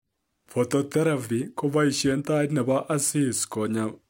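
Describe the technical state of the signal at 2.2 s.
At 2.2 s the speech carries a fine hiss and grainy roughness that swells on louder and brighter sounds and drops away in pauses. This is sample clock jitter, present across the entire clip rather than only at this moment. The converter's clock wanders by a couple of microseconds, so each sample lands slightly off time. The error scales with how steeply the waveform moves, leaving a noise floor roughly 30 dB below the speech.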